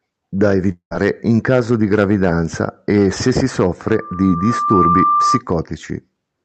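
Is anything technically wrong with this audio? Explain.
Yes, there are two faults in this speech.

From 0.71 to 0.93 s, just before "in caso di gravidanza", a long network dropout is the likely cause. The last sound is stretched into a fading buzz for about 0.19 s, then roughly 0.09 s of silence follows. Speech resumes with a piece missing, which sets it apart from a deliberate pause.

From 3.88 to 5.43 s, after "gravidanza e se si", there is a loudspeaker feedback squeal at 1.2 kHz. The microphone re-amplifies its own loudspeaker output, so the tone grows on its own over about a second to about 5 dB above the speech. That swelling distinguishes it from a steady interfering tone.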